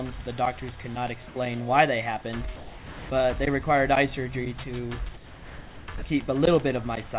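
Sound dropped by the voice detector at 1.28–1.36 s, 2.56–3.10 s, 5.14–5.88 s and 5.98–6.02 s: the sound gives way to steady comfort noise, then returns. The likely cause is the sender's detector mistaking quiet sound for background and stopping transmission, leaving the receiver to fill the gaps, the longest being 0.74 s. All of it is band-limited, with nothing above 4 kHz from the call path, which fits a narrowband telephone codec.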